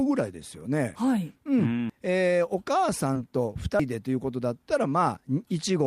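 At 1.90 s and again at 3.80 s the sound jumps abruptly, about a tenth of a second gone with no gap, two seconds apart. This is audio missing between chunks, likely from chunked recording dropping samples at each boundary. From 3.13 to 3.18 s there is a short concealed packet loss. About 20 ms never arrived and was filled by extending the preceding sound, heard as a brief smear rather than a clean skip.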